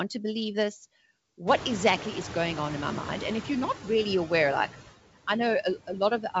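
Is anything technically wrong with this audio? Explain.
Yes. The clip has four processing faults.

Noise suppressor artifacts run throughout. The suppressor pulls steady background down by about 18 dB frame by frame, leaving a residue that pumps between phrases, unlike plain room noise, which holds steady. The G.722 path's cut-off above 7 kHz is a separate effect.

From 1.47 to 3.67 s the noise suppressor is catching up. When the room noise jumps by about 23 dB around 1.5 s, the noise passes nearly unreduced (about 6 dB less) and sinks gradually over 2.2 s. The slow fade sets it apart from a gate or a gain change. It settles before "really aware like I".

At 2.73 s there is a single sharp click, likely from a few dropped samples. The waveform jumps and no audible sound is lost, unlike a packet-loss gap.

From 5.87 to 6.35 s, after "really aware like I", speech is cut by the noise suppressor. 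About 100 ms of speech drops by up to about 9 dB and sounds swallowed.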